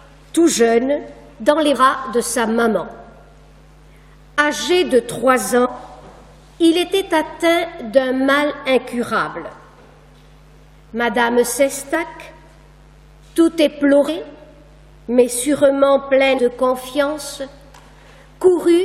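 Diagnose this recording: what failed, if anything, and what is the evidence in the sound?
Codec stage: compressed frames skipped at 1.74, 5.64, 11.94, 14.07 and 16.37 s. The audio jumps ahead by about 20 to 150 ms each time.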